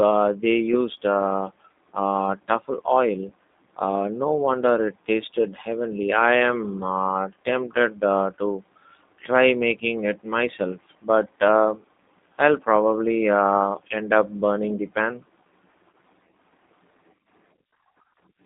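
G.729 codec damage runs throughout. Speech is rebuilt at 8 kbit/s from a vocal-tract filter, pitch predictor and sparse pulses, sounding rough and synthetic within a 200 Hz to 3.7 kHz line band.

VoIP packet loss concealed by the speech codec occurs at 3.29 s and from 15.92 to 15.94 s. The decoder extrapolates the last pitch and filter across gaps that fit one and two lost 10 ms frames, leaving brief buzzy or noisy, smeared blips.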